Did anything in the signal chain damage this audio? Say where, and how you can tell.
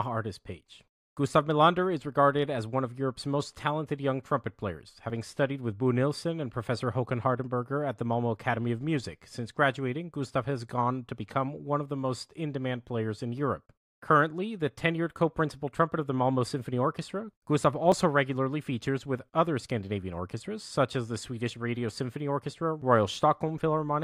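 Yes, likely a dropped buffer (overrun) in the driver: samples were overwritten before being read, so at 17.92 s the speech skips ahead roughly 20 ms.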